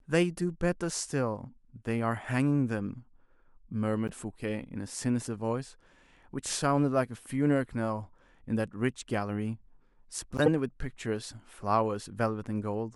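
At 4.08 to 4.11 s a short blip marks a corrupt frame decoded, and at 10.37 to 10.48 s a louder burst, peaking near about -10 dBFS, follows: flipped bits made the decoder misplace energy across frequencies, which fits one and then several damaged frames, unlike the gap or smearing of dropped frames.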